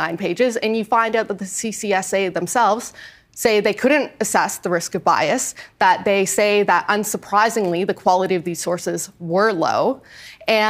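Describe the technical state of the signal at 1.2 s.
At 1.2 s the signal is intact, with no dropout, distortion or other fault audible at that point.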